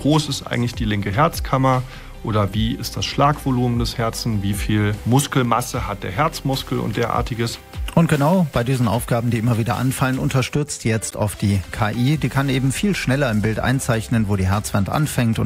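At 11.07 to 11.14 s a corrupt frame decoded plays as a brief chirp, blip or burst of noise peaking around -20 dBFS, consistent with a few damaged frames. On a spectrogram it shows as a misplaced vertical smear.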